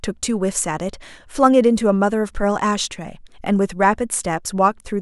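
Nothing in this bit of speech stands out as a technical fault; there's simply nothing to point to here.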